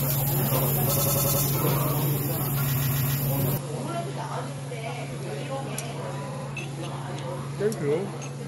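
Repeated frames at 0.95 to 1.42 s (a 93 ms block played five extra times) and 2.74 to 3.16 s (a 139 ms block, three extra times) make the sound stutter. The waveform shows identical stretches repeating. From 3.58 s the audio turns duller and about 10 dB quieter over a faint new noise floor, with no gap at the change. The spectrogram is empty above 11.4 kHz, which points to the input likely having switched to a poorer device. Shorter repeated frames follow at 4.58 to 4.65 s and 6.32 to 6.46 s, 70 ms blocks that each add a brief stutter.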